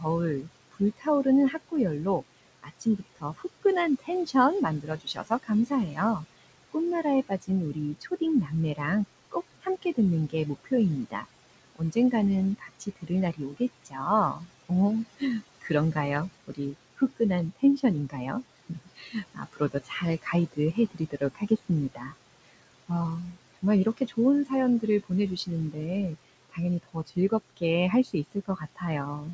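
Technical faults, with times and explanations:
Throughout: noise suppressor artifacts. The room noise sits only about 15 dB under the speech, and the suppressor pulls it down by about 19 dB, band by band and frame by frame. So the background sinks away in the gaps and swells back up under each phrase.
0.0–18.16 s, 18.69–25.76 s and 26.5–29.34 s: speech cut by the noise suppressor. In these stretches the suppressor mistakes quiet parts of the speech for noise and turns them down with the background, by about 21 dB at worst. That adds up to roughly 3 seconds of affected speech in the first span and about 2 in the second. Soft consonants and trailing word endings come out swallowed or faint, as if clipped short.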